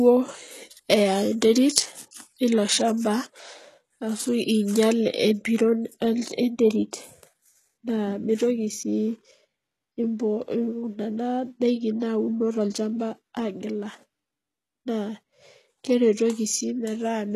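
HE-AAC compression runs through the whole clip. The speech has a bright but synthetic treble, and nothing is present above about 15.1 kHz. The damage is heavy and points to a very low bitrate, around 16 kbps, most likely from HE-AAC v2. Only the lower spectrum is coded. The upper bands are rebuilt by copying lower content upward and shaping it with a rough envelope, so the harmonics don't line up across the crossover and the s sounds turn gritty and metallic.

Pre-echo occurs from 12.00 to 12.02 s, a smear about 23 ms long. A sharp attack lands late in a transform block. The quantisation noise, sized for the loud onset, is spread evenly across the whole block, so it also fills the quiet stretch just before the attack. The result is a brief hiss ahead of the onset, and the attack itself sounds softened and blurred rather than crisp.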